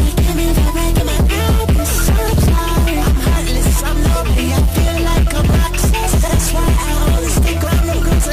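Compressed frames skipped at 0.96, 5.33, 6.35 and 7.63 s: whole frames go unplayed, jumping ahead about 70, 20, 50 and 150 ms.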